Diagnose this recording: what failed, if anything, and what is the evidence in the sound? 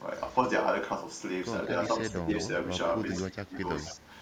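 Call processing is where this goes wrong, and the first problem is echo leak. Short delayed copies of the speech turn up at 0.29–0.36, 1.63–1.70, 2.36–2.42, 3.11–3.19 and 3.76–3.95 s, each trailing by about 157 ms. The first is barely there, and the loudest, at 3.11 s, sits only about 10 dB under the speech. The likely cause is the far end's canceller not fully cancelling its loudspeaker pickup and sending the residue back.

The second problem is speech suppressed in double talk, from the same call-processing stage. At 2.22–2.30 s and again at 3.32–3.64 s the speech dips by roughly 15 dB. That's a brief duck of about 70 ms first, then around 200 ms affected later. The likely cause is both ends talking over each other, so the echo canceller couldn't tell the near talker from echo and pulled everything down.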